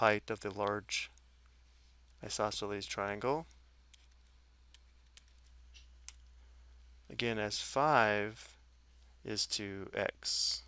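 No technical faults are audible anywhere in the recording.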